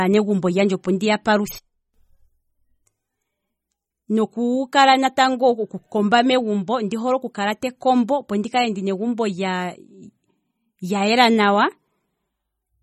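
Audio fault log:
throughout MP3 compression: the speech sounds watery and swirly with smeared consonant onsets, and nothing is heard above about 16.4 kHz. This is likely a low-bitrate MP3 encode, around 32 kbps. Weak frequency lines drop in and out between frames, so the damage swirls over time rather than sounding like a clean low-pass dullness.
1.59–1.94 s sudden gain jump: the level drops by about 20 dB in one step with no fade and comes back just as abruptly. Speech and background noise fall together, which separates it from a dropout or a compressor duck. The likely cause is a gain change applied without a ramp.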